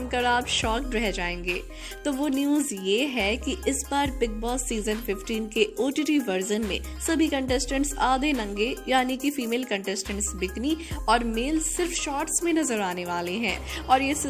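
No faults can be heard anywhere in the clip. Nothing in it points to a problem in how the audio was captured or carried.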